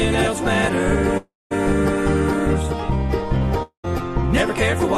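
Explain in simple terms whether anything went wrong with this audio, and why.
The sound cuts out twice, from 1.17 to 1.53 s and from 3.63 to 3.86 s, likely a long network dropout. Each gap starts as a fading buzz or hiss and then goes silent, and the sound resumes with about 340 ms and 220 ms lost. A brief glitch would only blip.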